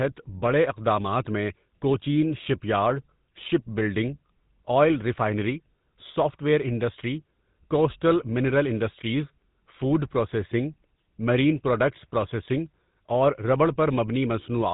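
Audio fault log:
throughout, GSM full-rate codec: plainly buzzy, gravelly speech, nothing above 3.8 kHz, from pulse-driven vocal-tract modelling, which fits a 13 kbps stream.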